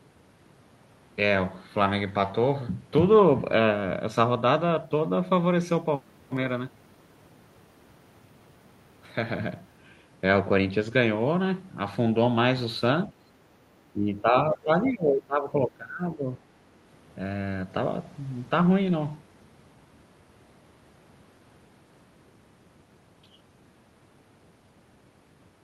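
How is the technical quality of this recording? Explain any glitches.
The recording has two stretches where the speech is suppressed in double talk, from 13.08 to 13.33 s and from 13.93 to 16.39 s. In both, the level sinks by around 20 dB, most of it in the longer stretch. The likely cause is an echo canceller that couldn't tell this talker from loudspeaker echo while both sides spoke, so it turned the speech down. Audio over the call path tops out near 12 kHz, which fits Opus at a moderate bitrate.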